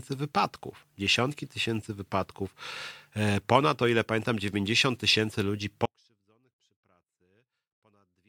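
At 5.86 s the speech cuts out abruptly and never returns. This is an audio dropout to a faint residue, lasting to the end. Only a faint trace of the sound remains, about 40 dB down. The likely cause is a lost signal feeding a path that stayed live.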